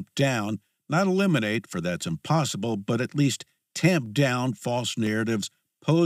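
From 3.06 s to 5.07 s the speech carries periodic USB or driver dropouts: about three ticks spaced exactly 1.0 s apart. At each one, something blocks the audio path for a moment and roughly half a millisecond of samples is skipped, so the waveform jumps and clicks. What separates this from random clicks or crackle is the metronomic spacing, and the ticks sound only where there is signal.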